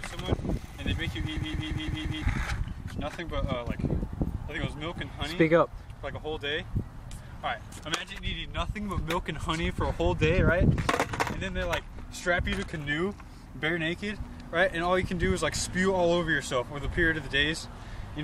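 From 1.37 s to 2.22 s there is a system hang loop: the host or driver stalled while the audio hardware kept replaying the same ring buffer. A 170.67 ms segment repeats exactly five times, cycling at 5.86 Hz, which fits an 8192-sample buffer. At that length the result is a rhythmic machine-gun stutter rather than a buzz. When playback resumes, about a second of the original audio is missing.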